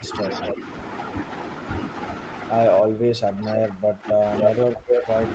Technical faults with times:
0.00-0.64 speech suppressed in double talk
0.22-0.54 echo leak
2.81-5.34 speech suppressed in double talk
3.45-3.58 echo leak
4.41-5.34 echo leak

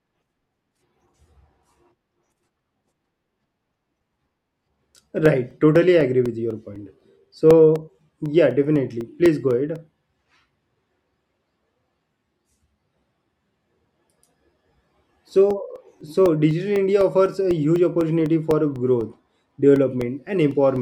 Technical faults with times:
0.25-20.77 periodic USB or driver dropouts

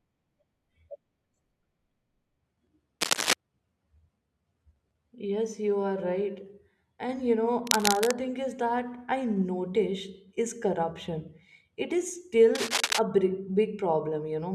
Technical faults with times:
3.01-3.33 cable scratch noise
7.67-8.13 cable scratch noise
12.55-12.99 cable scratch noise

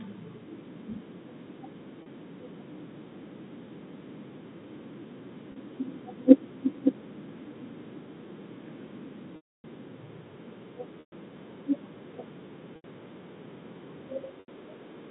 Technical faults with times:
2.02-2.06 packet loss with pitch repetition
5.52-5.56 packet loss with pitch repetition
9.36-9.64 packet loss with pitch repetition
11.00-11.12 packet loss with pitch repetition
12.76-12.84 packet loss with pitch repetition
14.40-14.48 packet loss with pitch repetition

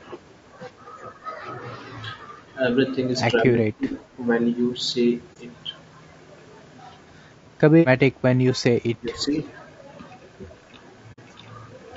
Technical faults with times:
0.00-11.97 low-delay AAC compression
3.37-3.98 speech suppressed in double talk
5.33-5.37 AAC frame loss with muting
8.98-9.37 speech suppressed in double talk
11.12-11.19 AAC frame loss with muting

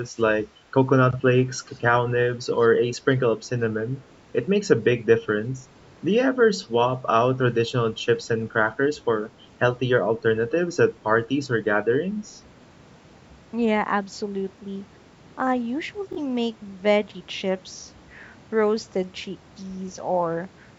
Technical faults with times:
0.17-0.21 echo leak
1.71-1.80 echo leak
16.13-16.19 Bluetooth stutter

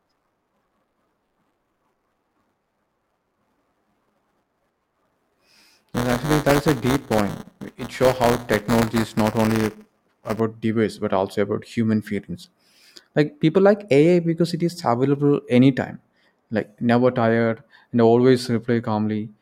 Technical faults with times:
0.00-10.40 buffer tearing

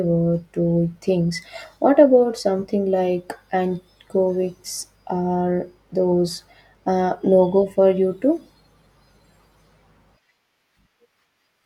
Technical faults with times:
none

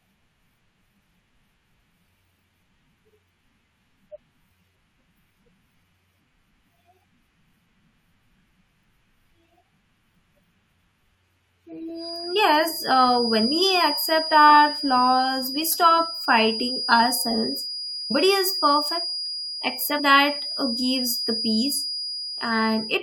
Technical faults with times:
8.49 damaged data in a compressed stream
11.92-23.03 feedback whistle
18.10 damaged data in a compressed stream
19.98 damaged data in a compressed stream

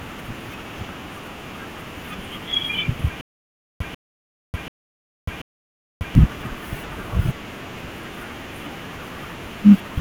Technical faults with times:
3.21-6.15 stutter with silent gaps

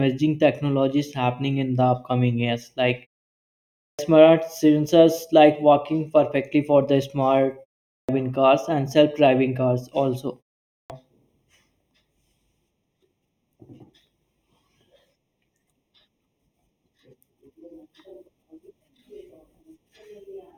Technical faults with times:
0.00-20.57 channel delay (comb filtering)
3.77-3.99 clipped start after a pause
7.88-8.09 clipped start after a pause
10.71-10.90 clipped start after a pause

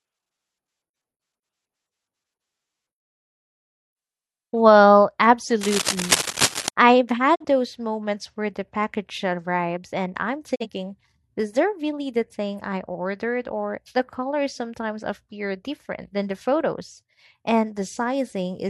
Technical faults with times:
5.61-6.69 cable scratch noise
7.34-7.45 digital broadcast dropout
10.54-10.66 digital broadcast dropout

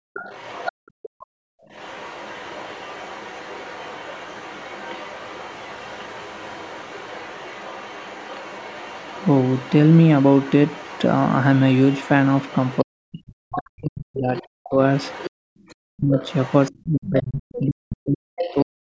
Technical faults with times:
0.00-0.14 background gated by the echo canceller
0.14-18.65 other side's voice leaking through
0.72-0.78 speech suppressed in double talk
1.09-1.67 background gated by the echo canceller
12.83-14.79 speech suppressed in double talk
15.31-15.48 background gated by the echo canceller
15.76-18.90 speech suppressed in double talk

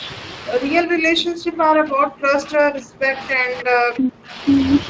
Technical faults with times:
0.00-4.89 Speex codec
0.83-4.46 speech suppressed in double talk
3.58-3.62 echo leak

